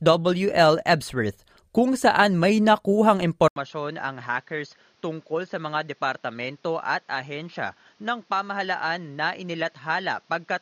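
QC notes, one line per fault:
3.48–10.61 s: input switched to a poorer device. Right after "kung saan may nakuhang" there is an 80 ms gap, then the speech turns dull, nothing above 6.8 kHz, drops roughly 10 dB, and gains a new noise floor, likely from a narrower-band microphone taking over.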